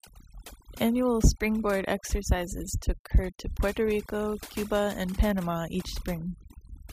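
Overdone noise removal runs through the whole speech clip: a noise reducer set too aggressively pulls individual frequency bands down whenever they sit near its noise estimate, so the background drops and breaks up into twinkling specks, while the voice's quieter components vanish too.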